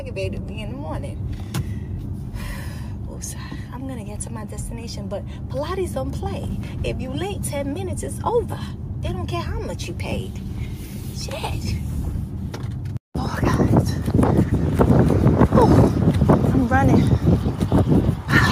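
No technical faults can be heard anywhere in this recording.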